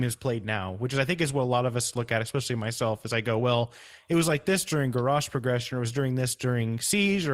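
At 4.25–4.31 s, after "go well it was", and at 5.39 s, before "or it was during", a lost packet was rebuilt from error correction. A low-bitrate copy fills each gap, about 40 ms and 20 ms of speech, so there is no dropout, only a brief rougher, noisier patch.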